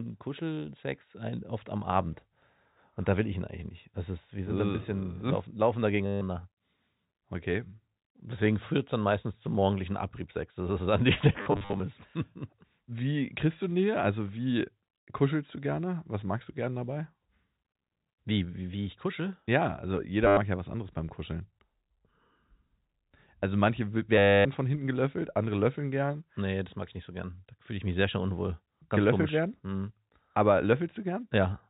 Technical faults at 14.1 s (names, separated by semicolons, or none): none